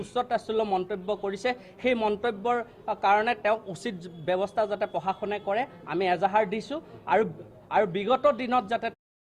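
No technical faults are audible.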